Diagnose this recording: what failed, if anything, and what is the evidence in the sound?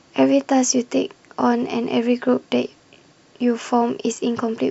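Nothing failed: the speech carries no audible defect at any stage of the chain, so there is no evidence to report.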